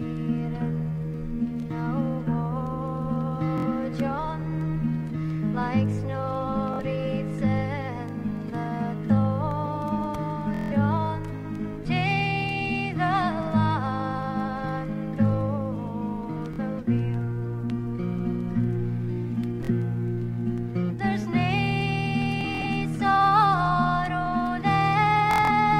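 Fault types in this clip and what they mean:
Bluetooth stutter: a brief buzzing, machine-gun repeat of a tiny slice of sound at 3.58, 6.74, 10.54, 16.54, 19.65, 22.41 and 25.31 s. The sound then jumps ahead as though it had kept playing. The worst is at 10.54 s, where about 160 ms goes missing. The last two are broken into scattered bursts. Late or lost wireless packets made the receiver replay its last slice of about 23 ms until fresh data arrived.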